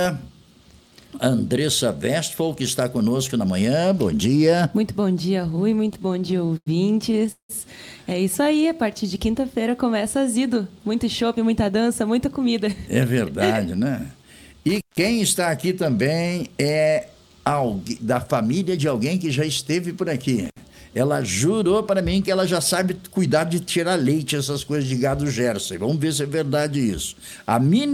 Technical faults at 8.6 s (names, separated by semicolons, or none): jitter buffer slow-down